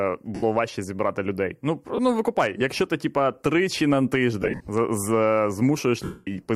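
Brief noisy smears cover the speech at 0.35–0.43 s before "важче зібрати людей", 1.96–1.99 s before "ну викупай якщо ти", 4.42–4.68 s after "ти типа тричі на" (scattered, longest run around 50 ms), and 6.04–6.28 s. These are lost LE Audio frames. The LC3 decoder filled each gap by replaying the last spectrum with scrambled phase and let it decay.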